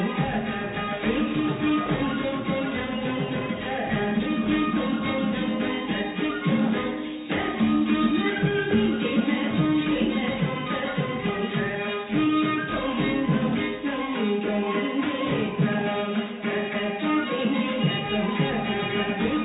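The sound carries no audible technical fault; it reached this point through a WebRTC call path using G.711 mu-law at 64 kbps, which leaves nothing above 4 kHz, and that narrow band is simply what this call codec delivers.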